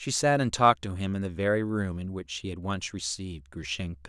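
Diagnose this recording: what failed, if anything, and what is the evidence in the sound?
Nothing failed: no stage from capture to playback leaves any audible fault in the speech, so there is nothing to diagnose.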